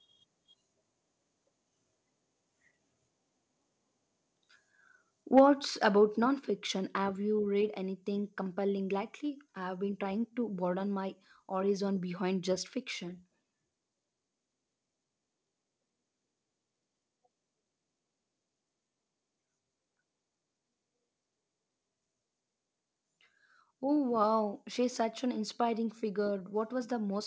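A speech recording with a short burst of microphone overload from 5.37 to 5.41 s. The peaks there run about 3 dB past the converter's limit, and roughly a tenth of the samples are flattened. That gives a harsh, crackly edge. The likely cause is input gain set too high for the converter. Right after, the microphone volume is stepped down. The level drops by about 3 dB at 5.39 s and by about 4 dB at 6.39 s. Both are sudden and affect voice and background together. This is likely automatic gain control cutting the input after the clipped peak. The audio also passes through a call path whose bandwidth ends at 8 kHz.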